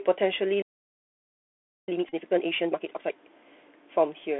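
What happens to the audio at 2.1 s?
A short burst of Bluetooth headset packet repetition runs from 2.08 to 2.12 s. Voice packets on the headset link were lost over roughly 30 ms, and the chip re-decoded the last good packet's bits in their place. Because each packet spans 3.75 ms, the repeats form a brief steady buzz near 267 Hz, which fits a run of about eight lost packets, before normal audio resumes.

This burst sits inside a time-compressed catch-up that lasts from 1.88 to 3.12 s. After a stall, the player clears its backlog by cutting out small segments and cross-fading across the joins, here at 2.0x speed. The audio sounds hurried but keeps its normal pitch.

Underneath both, the Bluetooth CVSD headset codec is present throughout. It encodes one bit per sample as an up-or-down step of adaptive size, which points to a 64 kbps narrowband link. The band is limited to about 250 Hz to 3.5 kHz. 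Loud, high-frequency content outruns the step size and distorts, s sounds turn scratchy, and a granular hiss lies under the speech. At 2.1 s this coloring is plainly audible beneath the buzz.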